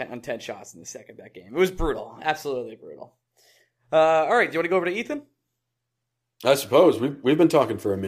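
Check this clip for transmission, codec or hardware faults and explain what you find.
No transmission, codec or hardware faults turn up in this clip.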